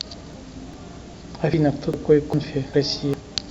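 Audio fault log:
0.34, 0.74, 1.14, 1.54, 1.94, 2.34, 2.74 and 3.14 s: audio missing between chunks. Every 0.4 s about a tenth of a second of speech drops out and the two sides butt together, likely from 0.5 s processing chunks losing their tails. The waveform shows abrupt splices, and the spectrogram shows vertical seams where harmonics jump.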